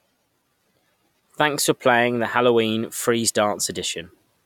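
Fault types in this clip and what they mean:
No fault types are present in this clip.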